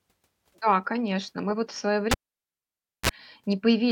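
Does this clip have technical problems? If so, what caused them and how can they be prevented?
Yes. At 2.11 s a cable pulled and plugged in cuts the speech with a pop. About 0.93 s of near silence follows, then a 32 ms burst of 60 Hz mains buzz as only the plug tip touches, and a second pop at 3.09 s. On a waveform, two sharp spikes bracket a flat line. A spectrogram shows vertical broadband streaks, with thin 60 Hz harmonic bands just before the second. Mute the channel before changing cables, and secure connectors so they can't be pulled mid-take.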